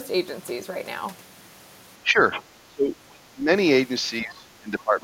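From 2.03 to 2.19 s the speech dips by about 10 dB, speech suppressed in double talk, likely because the echo canceller ducked the talker while the far side spoke, leaving a shallow notch in the waveform envelope. At 2.32 to 2.43 s the other side's voice leaks through, likely residual loudspeaker echo, roughly 15 dB below the talker, showing as faint extra harmonics on the spectrogram. From 2.62 to 3.48 s the speech is suppressed far harder, about 25 dB at its deepest. From 4.22 s to the end it is suppressed again, by about 15 dB, with the waveform visibly thinned.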